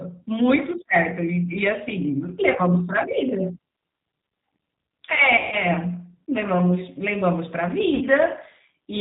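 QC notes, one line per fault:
throughout: G.729 codec. Audio is rebuilt from a vocal tract filter and sparse pulses at 8 kbit/s, capped at 4 kHz, and sounds plainly rough and synthetic.
5.37–5.56 s, 7.95–8.05 s: VoIP packet loss concealed by the speech codec. About 150 ms and 60 ms are missing. The decoder repeats the last pitch and filter, producing a fading buzzy tone or coloured noise, and sound stays weak briefly afterwards.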